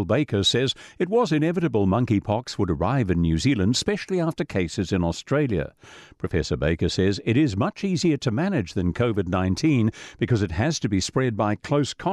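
No audible technical fault turns up anywhere in the recording; the speech signal holds steady and intact throughout.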